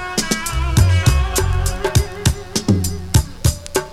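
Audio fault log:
Throughout, mains buzz: a dimmer, rectifier or unshielded run on a 60 Hz supply is injecting sharp switching spikes into the signal path twice per cycle, so interference arrives at 120 pulses a second with harmonics of 60 Hz stacking up into the kilohertz range. Sitting roughly 30 dB below the wanted sound, it forms a constant, gritty, raspy buzz that never lets up, brighter and harsher than a plain low hum.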